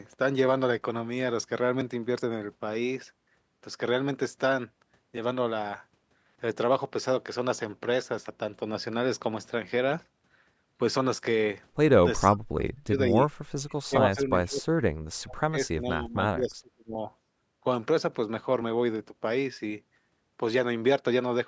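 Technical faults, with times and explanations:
12.37–13.17 s, 13.76–15.01 s and 15.19–16.99 s, speech suppressed in double talk: the speech sinks sharply, by about 40, 35 and 30 dB at its deepest, across roughly 0.7, 1 and 1.5 s. This is likely an echo canceller turning down the near talker along with the loudspeaker echo while both sides speak. On a spectrogram the harmonics fade or vanish in patches. The waveform envelope shrinks sharply.
13.68–13.75 s, echo leak: a brief, faint copy of earlier sound about 30 dB below the speech and delayed by 466 ms. This is likely echo that the far end's canceller failed to remove from its loudspeaker pickup and sent back. It sounds like a ghostly scrap. A spectrogram shows a weak smear repeating earlier patterns. The waveform shows only a tiny ripple.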